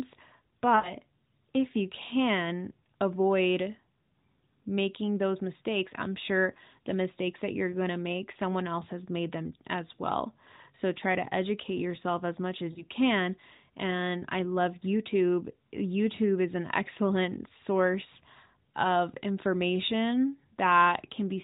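Radio errors corrupted AMR frames in this speech recording, so the decoder discarded them and filled the gaps from its last good pitch and vocal tract settings with falling gain. These lost AMR speech frames show up at 0.76 to 0.93 s, where roughly 80 ms of audio is concealed, and at 12.72 to 12.84 s, about 40 ms. Each gap sounds smeared and drawn out as it fades, then briefly thin as speech resumes. The AMR narrowband path band-limits everything below 4 kHz, with light codec colouring.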